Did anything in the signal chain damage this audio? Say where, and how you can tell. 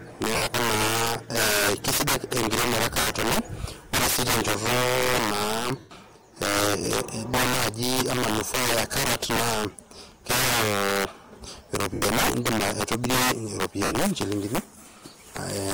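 Yes. Integer overflow at the sample-format or gain stage: loud speech peaks, about 14 dB over full scale, wrap to the opposite sign throughout. This produces violent cracks rather than the flattened buzz of clipping.

Lost LE Audio frames on the Bluetooth link at 0.35–0.47, 3.00–3.07, 5.79–5.91, 11.94–12.02 and 13.85–13.95 s, each lasting 70–120 ms. Concealment turns the sound into a fading noisy smear, not the hard silence of a dropout.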